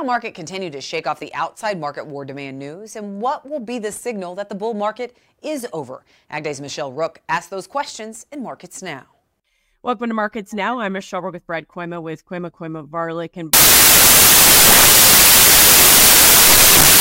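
Samples built from the wrong bytes take over from 13.53 s to the end: the reader misassembles each sample's bytes, so the rapidly changing low-order bits become the dominant part of each value. The speech turns into loud, harsh broadband noise, close to white on the louder sounds.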